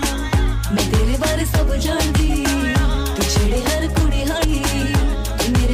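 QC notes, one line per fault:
4.43 s, compressed frames skipped: the audio jumps ahead by roughly a fifth of a second, consistent with about ten lost frames of around 26 ms each. Overlapping frames smear the join into a soft blip. On a spectrogram it shows as an abrupt discontinuity, not a vertical click line.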